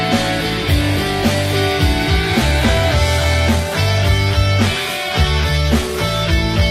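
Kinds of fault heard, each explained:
Adaptive stream at a lower bitrate: at 2.21 s the sound abruptly degrades with no gap and stays that way to the end. Nothing reaches above 14.9 kHz and the treble turns synthetic, which fits a switch to a low-rate HE-AAC version. Unlike packet loss, nothing drops out.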